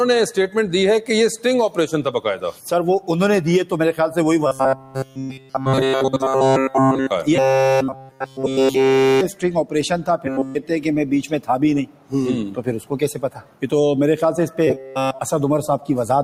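Throughout, a speech-tuned noise suppressor left active treats steady tones and tails as noise, so the level pumps by around 10 dB and held sound thins.

From 4.47 to 7.11 s, audio likely arriving too seldom makes the player repeat each short buffer, about 7.5 ms long, so the sound becomes a rigid metallic buzz at 133 Hz. Within that stretch, from 4.76 to 5.55 s, sound cut by the noise suppressor sinks by about 11 dB as sustained parts are mistaken for noise.

The robotic buzz returns from 7.36 to 9.21 s, with another suppressor cut of about 11 dB from 7.94 to 8.40 s. The buzz comes back briefly from 10.25 to 10.55 s. The suppressor then clips sustained sound at 11.86 to 12.13 s and 13.27 to 13.65 s. The buzz reappears a final time from 14.67 to 15.21 s.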